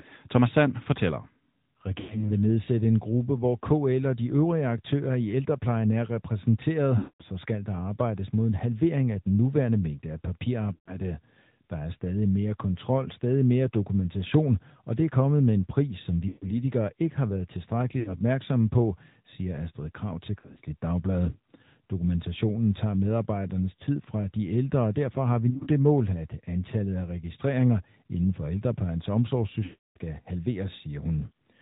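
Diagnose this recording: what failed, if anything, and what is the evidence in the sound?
Speech through a mobile codec: this is the AMR narrowband mobile codec at 10.2 kbps, and the damage is plainly audible. Nothing above 4 kHz gets through, so sibilants are dull and the whole thing sounds boxy. The voice has that buzzy, slightly synthetic edge because the codec rebuilds it from a vocal tract filter driven by a handful of pulses per 5 ms subframe.

On top of that, lost AMR speech frames, a radio-link problem. There are dropouts at 2.0, 6.98, 10.74, 16.28, 18.0 (after "ikke har været"), 20.4, 25.5 (between "og derfor har vi" and "mål at antallet af") and 29.64 s (after "registreringer inden for ældreplejens"). They run 60 to 320 ms. At 20.4 and 25.5 s the losses are scattered short blips. When frames fail their checksum, the decoder repeats the last pitch and filter settings with falling gain, so the longer runs at 6.98 and 29.64 s smear out and fade to silence.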